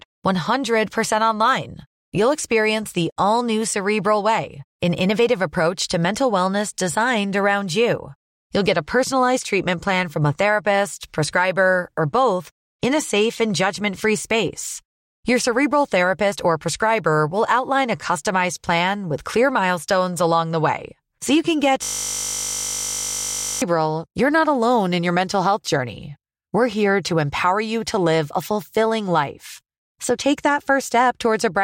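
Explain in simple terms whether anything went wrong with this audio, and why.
System hang loop, 21.84 to 23.62 s: the computer froze while the sound card kept replaying one 20 ms snippet, producing a steady 50 Hz buzz.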